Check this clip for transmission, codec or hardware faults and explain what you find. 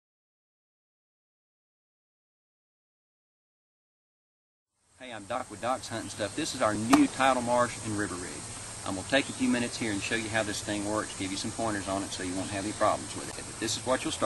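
Nothing in the signal points to a transmission, codec or hardware problem; its continuity and bandwidth stay steady throughout.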